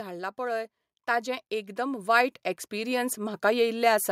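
From 0.36 s to 3.48 s, the level climbs steadily by about 10 dB. This is automatic gain rising. The gain control judged the incoming speech too quiet. It responded by turning its gain up, step by step, over roughly three seconds. Because the gain acts on the whole signal, the voice and the background noise swell together. The room seems to creep closer as the speech grows louder.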